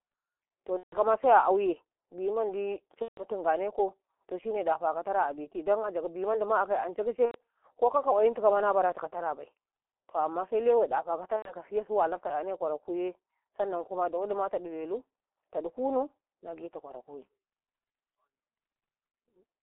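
G.723.1 codec damage runs through the whole speech clip: the band is held to 300 Hz to 3.4 kHz, and the coarse, slowly updated voice model, consistent with a 6.3 kbit/s mode, leaves the speech muffled and hoarse with smeared consonants.

VoIP packet loss concealed by the speech codec strikes at 0.77–0.98 s, 3.02–3.24 s, 7.26–7.37 s and 11.36–11.53 s. The decoder extrapolates the last pitch and filter, so the sound turns into a fading buzz or coloured noise. The gaps fit about 150 ms of lost frames in the first two cases and 90 ms in the last two. The voice stays weak briefly after each one.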